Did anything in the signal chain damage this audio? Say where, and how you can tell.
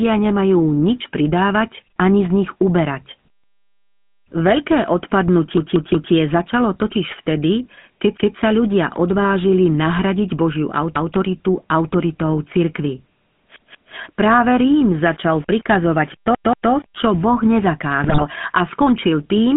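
Yes. The whole clip went through a GSM full-rate codec at 13 kbps. Speech sits in a 150 Hz to 3.5 kHz band with that buzzy, gravelly edge you get when a vocal-tract model is fed a thinned-out pulse excitation. That's the codec stage, and it's plainly audible.

There are also GSM bit errors from the radio link, twice. At 9.15 to 9.25 s, just after "vtedy keď sa ľudia", and at 18.04 to 18.23 s, right before "a skončil", you get squawks and gargling. Corrupted filter, pitch or gain values garble a few frames and make the level jump.

From 14.2 to 17.3 s the sound turns grainy in a way that tracks the signal, with quieter bits getting grittier. That's low bit depth without dither, likely from a sample-format conversion rounding down to about 7 bits, which leaves error roughly 30 dB below the signal.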